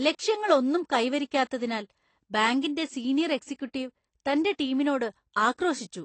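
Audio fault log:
throughout, AAC compression: the speech is dull and smeared, with nothing above 8.6 kHz and a watery, fizzy texture on sibilants. This is likely AAC-LC coding at a low bitrate near 32 kbps. Unlike a clean low-pass filter, the damage shows up inside the remaining band too.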